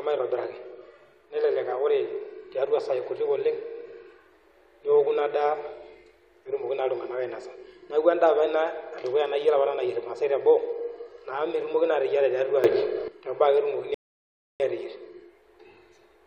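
A sudden gain jump runs from 12.64 to 13.08 s, where the speech and its background noise both leap up by about 11 dB in a single step, with no fade in between, and stay at that higher level until 13.08 s. Because the noise floor rises along with the speech, the change sits in the signal chain rather than in how the talker spoke. The likely cause is a digital gain setting applied instantly, without a ramp.

A rebuffering stall follows from 13.94 to 14.60 s. The speech cuts to silence for about 0.66 s and then picks up exactly where it stopped, with nothing skipped. The player had run out of downloaded audio and paused until more arrived, so the gap adds time to the clip instead of removing any of the speech.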